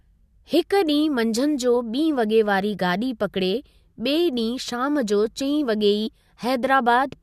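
Compressed frames skipped at 6.06 s: the speech jumps ahead by about 70 ms, roughly three 21.3 ms frames.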